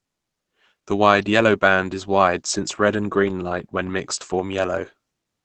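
Throughout, the speech was likely passed through low-rate Opus compression in speech mode. Nothing above 8.6 kHz remains, leaving it plainly muffled and hoarse.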